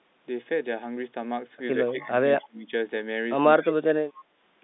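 From 1.89 to 2.14 s the speech sinks by about 15 dB, then from 2.4 to 2.72 s and again from 3.59 to 4.22 s it is pushed down by about 30 dB. This is speech suppressed in double talk. With both ends likely talking at once, the echo canceller could not tell the near talker from loudspeaker echo, so it attenuated everything.

Inside the first two dips, at 1.99 to 2.03 s and 2.41 to 2.47 s, a faint scrap of delayed sound surfaces, about 30 dB below the main speech and trailing it by 166 ms. This is an echo leak. The far end is likely on a loudspeaker, and its echo canceller failed to strip out everything the microphone picked up. The residue came back down the line as a brief copy.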